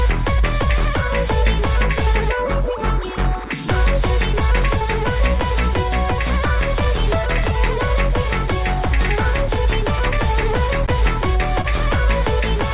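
Near the end, at 10.86 s and again at 11.61 s, a short concealed packet loss occurs: a packet of audio, about 20 ms each time, failed to reach the decoder in time, and the receiver improvised a substitute by extending the preceding sound before easing back into real audio. Each event lasts only a few hundredths of a second, 33 ms and 46 ms, and heard through the band-limited call path that stops at 4 kHz, each comes across as a brief smear or wobble.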